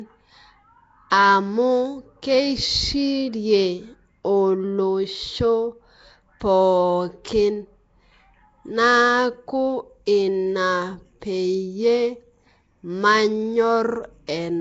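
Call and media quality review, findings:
Throughout, speech coded at a low fixed rate, likely Nellymoser Asao compression; the rough quality fits roughly 32 kbps. Weak bands are noise-filled and nothing remains above 7.7 kHz. Result: plainly audible hissy halo, smeared underwater tone, dull top end.

Pre-echo at 1.10 s (before "amu kieshirie", 16 ms spread) and 10.06 s (before "ina peyie", 11 ms spread). Transform block noise scaled to the loud onset spills backward into the quiet gap. Result: brief hiss ahead of each attack, onset softened and smeared.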